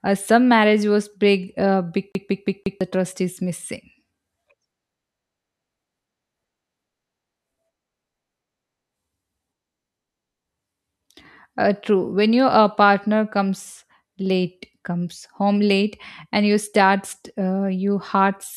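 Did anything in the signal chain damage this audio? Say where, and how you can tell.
Yes, at the playback stage: a CD stuck on one turn from 2.12 to 2.81 s, after "marriage was big uh" and before "the trust is missing". A 0.17 s slice repeats four times as the laser jumps back; the waveform shows identical blocks separated by brief mutes.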